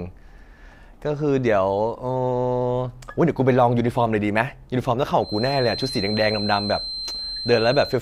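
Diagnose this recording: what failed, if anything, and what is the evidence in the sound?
The loudspeaker-to-microphone loop in the playback path is likely sitting right at the edge of feedback, producing a feedback whistle from 5.17 s to the end. A thin, steady 4.1 kHz tone, around 10 dB below the speech, swells and fades slowly but never runs away.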